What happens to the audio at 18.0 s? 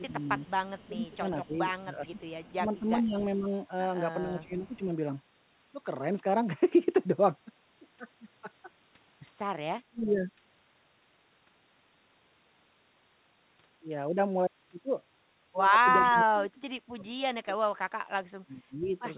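At 18.0 s you're right in the middle of a stretch from 16.02 to 18.84 s where the speech sinks way down, at its worst by around 30 dB. That's most likely speech suppressed in double talk: with both ends talking at once, the echo canceller couldn't tell this talker apart from the loudspeaker echo and pulled everything down together. The telephone-band sound, with nothing above 4 kHz, comes from the call path.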